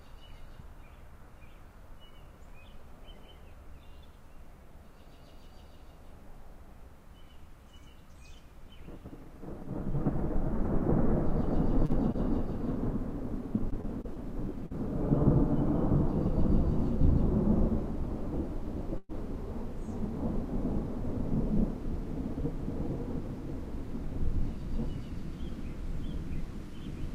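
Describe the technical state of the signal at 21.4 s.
At 21.4 s the audio is intact, with no dropout, distortion or other fault in the signal.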